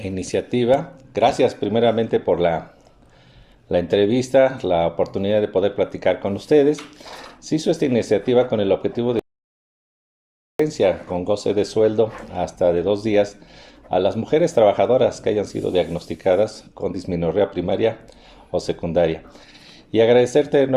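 An audio dropout to silence runs from 9.19 to 10.59 s, cutting about 1.4 s to silence with no room tone, likely from a lost input connection.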